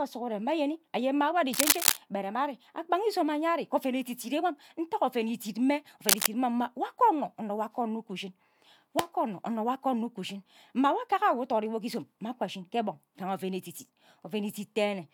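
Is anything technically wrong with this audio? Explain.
Yes. Cable scratch noise occurs from 1.53 to 1.97 s, after "mma wo ari", and from 6.05 to 6.27 s, after "ntaga oven idit mme". A worn cable or connector being moved likely made its contact resistance jump about rapidly, laying dense, irregular scratching over the speech, somewhat louder than it.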